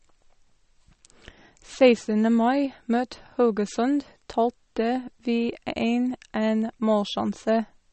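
All the way through, the speech has plainly audible watery swirl and no treble above 8.4 kHz, likely MP3 compression starved of bits, something near 35 kbps.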